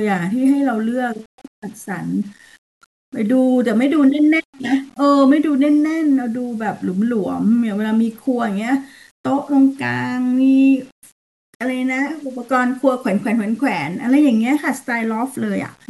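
Throughout the speech, a grainy, gritty distortion moves with the signal and roughens the quieter passages most, sitting roughly 35 dB below the level. This is low bit depth without dither, likely from rounding to 8 bits with no dither to decorrelate the error.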